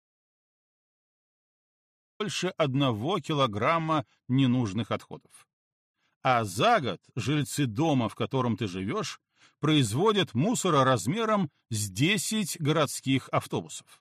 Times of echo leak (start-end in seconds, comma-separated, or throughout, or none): none